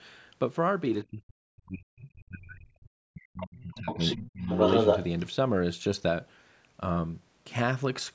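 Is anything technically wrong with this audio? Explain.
Yes. From 1.04 to 3.98 s the talker sinks sharply, by up to about 40 dB at its deepest, with around three seconds of the stretch thinned or broken off. It happens again from 4.16 to 4.49 s, dipping by about 30 dB. This is speech suppressed in double talk. With both ends talking at once, the echo canceller likely couldn't tell the local talker from the loudspeaker echo and turned both down.

From 3.77 to 4.17 s a second voice slips in, about 5 dB below the talker. From 4.43 to 5.09 s it returns about 5 dB above the talker, briefly dominating. This is the other side's voice leaking through, likely because the echo canceller left part of the loudspeaker playback in the microphone signal. The cut above 8 kHz comes from the call's microphone processing and is not a fault.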